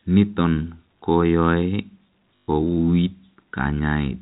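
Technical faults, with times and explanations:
2.41 to 2.48 s, packet loss with last packet repeated: about 120 ms of audio went missing, and the receiver filled the gap by replaying the last packet that arrived until fresh ones came in. The six-fold stutter points to 20 ms packets, so the repeats buzz at about 50 Hz. Through the 4 kHz ceiling of the G.711 telephone coding, this comes across as a brief robotic stutter.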